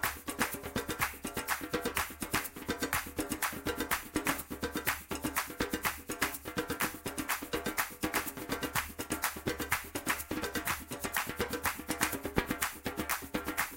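No technical faults can be heard anywhere in the audio, and the signal holds steady and intact from its first moment to its last.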